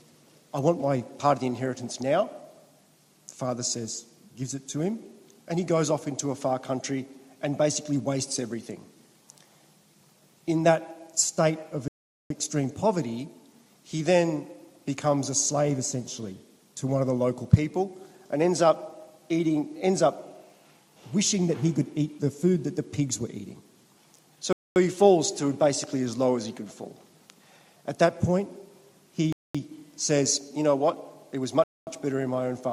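At 11.88, 24.53, 29.33 and 31.64 s the sound drops to silence for about 0.42, 0.23, 0.22 and 0.23 s, a Bluetooth stall, likely radio interference starving the receiver's playback buffer.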